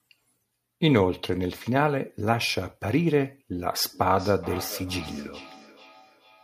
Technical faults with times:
3.93-6.44 feedback echo between two devices

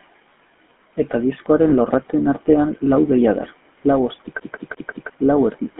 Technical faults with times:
0.00-5.79 channel delay (comb filtering)
0.00-5.79 GSM full-rate codec
1.70-1.73 lost GSM frames
4.40-5.10 CD stuck on one turn

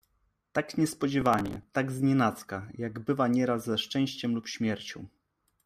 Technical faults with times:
1.21-1.63 processor overload crackle

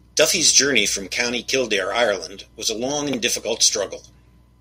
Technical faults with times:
0.20-0.79 microphone overload
1.17 microphone volume stepped down

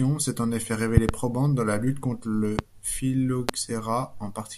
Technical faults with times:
0.97-1.12 loud pop
2.59-2.62 loud pop
3.49-3.51 loud pop

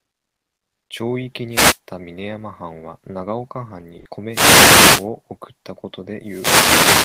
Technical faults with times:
1.50-1.79 wireless microphone noise hit
4.29-5.09 wireless microphone noise hit
6.21-7.04 wireless microphone noise hit

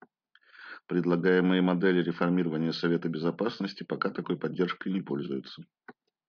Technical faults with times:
none

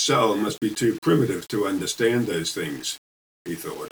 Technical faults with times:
0.00-3.91 low bit depth without dither

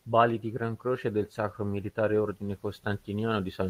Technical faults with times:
none

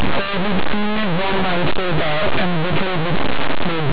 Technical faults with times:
0.00-3.92 linear audio read as companded

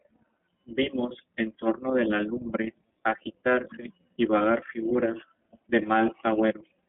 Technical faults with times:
0.00-6.89 iLBC codec

